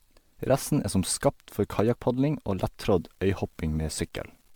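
Throughout the speech, the MP3 stream was likely decoded and re-encoded around seven times at 128 kbit/s, and each pass re-quantised the audio on a shifted frame grid, so coding noise and spectral gaps accumulated. This is generation loss: the voice sounds swirly and hollow, with a smeared, watery quality that 128 kbit/s by itself would not produce. Consonant attacks are blunted, and nothing is present above 19.9 kHz.

At 1.79 s, just after "er som skapt for", a stretch of under a millisecond, about 0.93 ms, was replaced by zeros. This block of digital silence drops the signal to nothing and restores it with no fade. The two hard edges are so close together that they come across as a tick or dip rather than an audible gap.

From 2.94 s to the end, the signal has been reduced to about 9 bits, probably by plain truncation without dither. Because the rounding error tracks the waveform rather than forming a steady hiss, this low bit depth without dither produces grainy distortion that shifts with the voice, sitting roughly 40 dB below the signal. 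Quieter moments turn gritty and sputter as they fall between the coarse steps.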